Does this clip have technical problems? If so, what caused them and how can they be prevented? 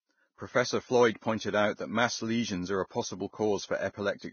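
Yes. Throughout the speech, nothing is heard above 6.6 kHz, and the treble sounds hissy and grainy, with rough tones and smeared attacks. This is likely heavy Vorbis compression at a very low bitrate, near 18 kbps. The coarsely quantised treble turns into noise. Encoding at a higher quality setting prevents it.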